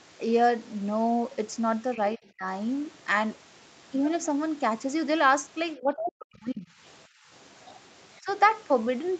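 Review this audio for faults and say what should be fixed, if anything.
The speech dips sharply from 2.15 to 2.46 s, loses about 25 dB, and drops out much further, around 40 dB, from 5.75 to 6.7 s, with a brief dip at 8.21–8.27 s. This is likely speech suppressed in double talk: the echo canceller mistook overlapping talk for loudspeaker echo and attenuated it. A canceller with better double-talk detection, or a headset, would prevent it.

From 7.08 to 7.28 s the room sound drops by about 20 dB and then returns. This is background gated by the echo canceller: while the loudspeaker played, it clamped the microphone hard, removing ambience along with the echo. Gentler suppression or comfort-noise filling would prevent it.

From 7.41 to 8.19 s a very faint second voice sits far below the speech. This is likely the other side's voice leaking through: the loudspeaker signal reached the microphone and the canceller did not fully remove it. 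Better speaker–microphone separation or a headset would prevent it.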